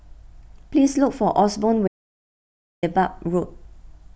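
An audio dropout to silence runs from 1.88 s to 2.83 s, cutting the speech off mid-flow for about 0.95 s before it resumes just as abruptly. The gap is silent, with no room tone or background hiss underneath, which points to the input signal being lost while recording continued. The likely cause is a momentary disconnection, failed link or accidental mute, with silence written in place of the missing audio.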